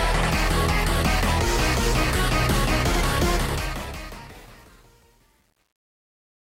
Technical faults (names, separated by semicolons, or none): truncation distortion on a fade